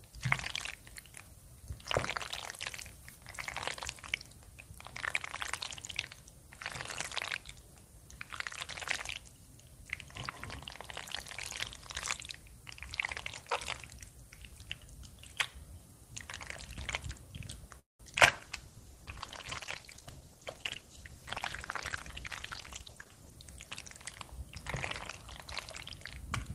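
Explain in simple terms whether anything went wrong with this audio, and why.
Just before 17.8 seconds the sound stops moving forward. The last instant is stretched into a brief fading tone, and then there is near silence until about 18.02 s. After that the audio picks up where it left off, so nothing is lost but a pause has been added. This is a call audio freeze. The likely cause is that data was held up on the way and the receiver ran out of audio to play, so it had to wait.

Right after that come two quick smears, at 18.15 to 18.18 s and at 18.27 to 18.30 s. Each lasts about four hundredths of a second, and a short sharp sound there could disappear. This is short concealed packet loss. Those small pieces never reached the receiver in time. The receiver covered each hole by carrying the previous sound forward and then blending back into the real audio.

From 18.27 s until about 23.46 s the sound turns coarser, which can come across as rough, watery or muffled, and then it clears. 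This is a call bitrate drop. The connection was judged to have less room, so the sender was told to describe the audio with far less detail. That detail only returned once the connection recovered, a little after 23 seconds.

Between 19.92 and 20.83 s the audio plays hurried, about 12% faster than normal but at the same pitch. This is a jitter buffer speed-up. After the earlier stall, the receiver was holding more audio than it wanted and was running behind. To catch up, it quietly cut out many tiny slices, about a tenth of a second in total, so the sound ran quicker without changing pitch.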